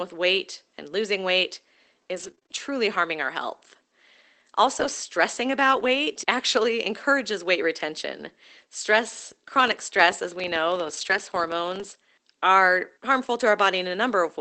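From 2.15 to 5.85 s there are scattered short gaps: about five tiny holes, the longest around 20 ms, together covering roughly a tenth of a second. The receiver bridges each one by extending the preceding sound, so the speech stays intelligible but picks up isolated ticks and brief smears. Unlike a filter fault, these hiccups fall at irregular moments and each one is only a single momentary blemish.

Between 9.16 and 11.96 s a filter restarted on every block produces a steady 25 Hz buzz. A filter that loses its memory at each block boundary starts every block from silence, and the resulting small transients repeat every 40 ms. The buzz grows and fades with the speech level. What separates it from packet loss is its strict regularity, a mechanical pulse at the block rate rather than random clicks.

Inside that stretch, lost packets are rebuilt from error correction at 10.81 to 11.19 s, with about 200 ms reconstructed, and again at 11.79 to 11.85 s. 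A short repair follows at 13.39 to 13.41 s. No gap can be heard in any of them. Instead, Opus plays the low-bitrate copies carried in the following packets, so those moments turn grainier and noisier, rather than clicking or repeating. The call path's cut-off near 8 kHz applies throughout and points to a roughly 24 kbps setting.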